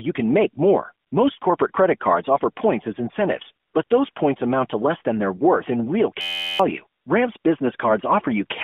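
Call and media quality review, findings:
AMR comfort noise: sender's voice activity detection declared silence and dropped speech frames; receiver filled the gaps with smooth synthetic noise, replacing the real background. Gaps at 1.08–1.12 s, 1.40–1.42 s (before "corporate credit cards offer"), 3.66–3.74 s, 3.84–3.90 s (after "offer points as incentives"), 4.12–4.16 s, 7.02–7.06 s and 7.38–7.44 s. Each lasts 20–80 ms, and the narrowband 200 Hz to 3.5 kHz line carries them.

System hang loop: host or driver froze after "worth in real" while the audio hardware replayed one ring buffer. From 6.21 to 6.60 s, an 11.6 ms slice repeats as a steady 86 Hz buzz, which fits a 512-sample buffer, and about 0.4 s of audio is lost.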